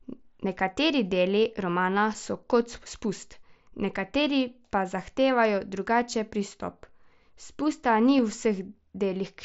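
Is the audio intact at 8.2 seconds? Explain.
No. At 8.18 s there is concealed Bluetooth headset packet loss. About 7.5 ms of audio went missing, which fits a single lost packet. The receiver patched the gap by repeating the closest-matching piece of the preceding waveform. Heard through the mSBC link, this brief patch is nearly inaudible.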